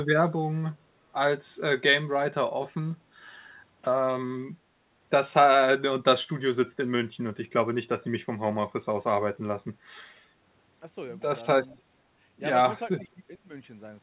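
Echo leak at 11.70 to 11.76 s: a faint scrap of delayed speech, arriving about 0.45 s late and roughly 30 dB down, likely from an echo canceller missing loudspeaker pickup.

Speech suppressed in double talk from 12.98 to 13.51 s: the voice dips in pieces by roughly 25 dB, likely because an echo canceller treated overlapping talk as echo.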